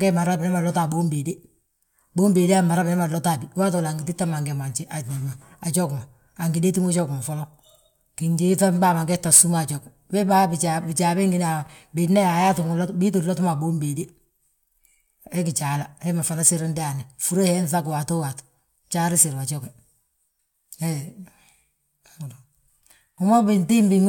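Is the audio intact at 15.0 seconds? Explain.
Yes, at 15.0 seconds the speech plays through cleanly, with no dropout, click, distortion or other fault to be heard.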